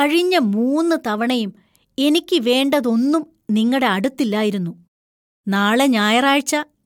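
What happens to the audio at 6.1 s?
Nothing goes wrong at 6.1 s: the speech carries on intact through that moment, with no dropout, click, distortion or other fault to be heard.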